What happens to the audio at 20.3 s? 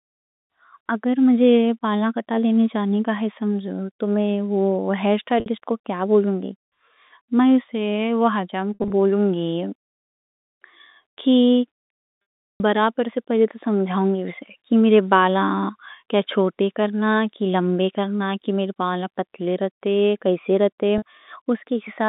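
Nothing goes wrong at 20.3 s; the speech stays intact there, still carried through the telephone-band G.711 path with its usual narrow line band.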